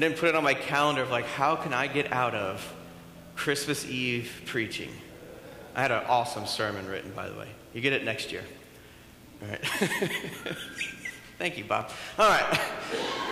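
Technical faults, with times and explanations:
11.81 to 12.94 s, CD scratch ticks: seven sharp little ticks land in just over a second, roughly six a second, the longest about 3 ms. That steady spacing is the giveaway. A scratch or blemish on the disc wipes out more data than error correction can rebuild, and it comes round once per revolution. The player then patches over or mutes those samples, and each repair is heard as a brief click or micro-dropout in the sound.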